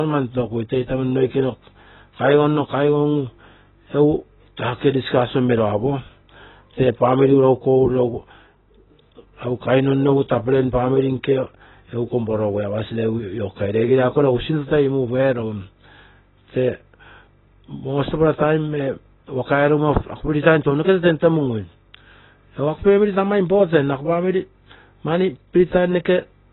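It's speech, and the whole thing is cut off hard at 4 kHz, dull and smeared, with a fizzy warble on sibilants, likely from heavy AAC compression at a very low bitrate, something like 16 kbps.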